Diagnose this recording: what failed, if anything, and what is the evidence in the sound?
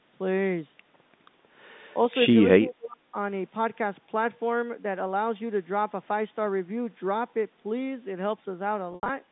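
Call processing: from 2.61 to 3.14 s the speech drops by roughly 30 dB, likely speech suppressed in double talk by the echo canceller. The waveform pinches sharply and the spectrogram thins out.

Network: between 8.91 and 9.09 s, about 130 ms goes missing across 180 ms, with the longest gap at 80 ms. Packet loss with pitch repetition bridges these gaps with buzzy, repeated periods that fade out. On a spectrogram these show as flat harmonic stripes.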